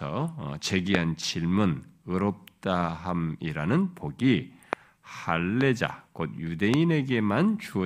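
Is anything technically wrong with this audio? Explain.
Yes, there are four loud pops in the speech, at 0.95–0.97, 4.73–4.75, 5.61–5.63 and 6.74–6.76 s. Each is a single sharp click roughly 20 dB above the speech (the third a bit softer), likely a brief voltage spike from a switch, static or driver glitch, with the speech carrying on underneath.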